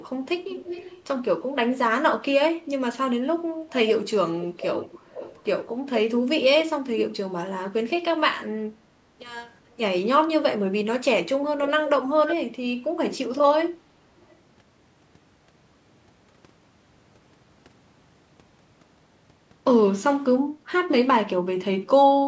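A delayed, quieter copy of the speech trails it at 0.5–1.04 s and 4.4–5.44 s, then in brief scraps at 12.27–12.36 s and, barely audible, 14.21–14.36 s. The copy lags by 311 to 441 ms and sits roughly 10–15 dB below the speech, with the last scrap far fainter. This is likely an echo leak, where a loudspeaker-side echo canceller let the returned sound through.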